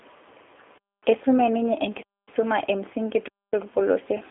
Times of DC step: none

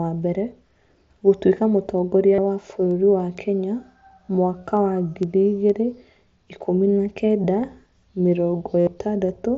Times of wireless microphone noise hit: none

